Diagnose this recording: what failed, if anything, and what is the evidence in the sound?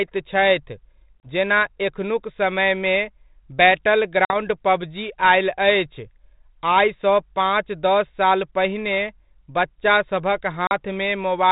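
Hard-edged silent gaps at 1.2, 4.25 and 10.67 s, 30 to 50 ms long, with speech briefly unsteady afterwards: network packet loss on an ADPCM call desynchronising the decoder's predictor.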